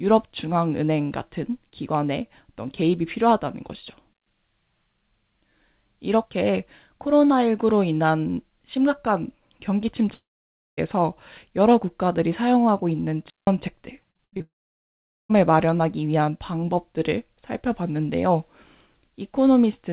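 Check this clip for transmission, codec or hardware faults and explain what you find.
Three kinds of transmission fault are audible in the speech: two wireless mutes, two long gaps that are likely network dropouts, and a short run of robotic packet loss. The audio is band-limited, with nothing above 4 kHz, which fits a narrowband telephone codec such as G.711 on a call path.

Digital wireless dropout, at 4.13 to 4.27 s and 13.30 to 13.47 s. The wireless link lost too much data, so the receiver muted. The first hole lasts 132 ms. The second lasts 173 ms. Each starts and ends with a very quick fade. The result is a clean pocket of near silence. No crackle or noise burst comes before or after.

Long network dropout, at 10.14 to 10.79 s and 14.42 to 15.37 s. These are likely long network dropouts where no audio arrived. The receiver first stretches the last sound into a fading buzz. Then it goes quiet, for about 560 ms in the first gap and about 800 ms in the second. 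The speech resumes later, and the lost stretch is simply gone.

Repeated packet loss (robotic sound), at 14.11 to 14.42 s. Packets went missing five times in quick succession. Each gap was patched by repeating the previous sound. The longest patch is 78 ms. About half of this short span is concealment rather than real audio. It sounds choppy, with bits of speech missing. It runs straight into the second long dropout.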